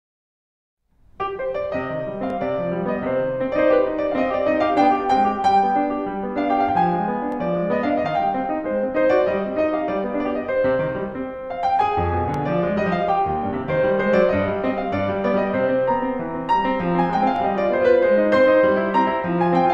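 At 2.30, 7.32, 12.34 and 17.36 s the music stutters briefly: overlapping chunks, where each 5-second block begins 20 ms before the previous one ended, so that sliver plays twice. The rigidly regular spacing and the doubled material, rather than a silent gap, distinguish it from dropouts.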